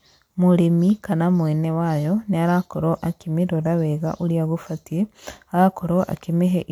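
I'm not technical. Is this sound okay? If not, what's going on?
Yes, nothing in this recording stood out as a problem when I listened to it.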